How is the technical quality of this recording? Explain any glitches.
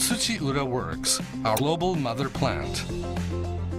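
There is one audible glitch, caused by damaged data in a compressed stream. From about 1.56 s to 1.60 s, a short corrupted stretch breaks the decoder's reading of the encoded frames. It cannot interpret the faulty bytes, loses frame sync, and must scan forward for the next valid header before normal decoding resumes. This is heard as a brief chirp, squawk, click or short hole lasting roughly 40 ms, an abrupt break in the sound.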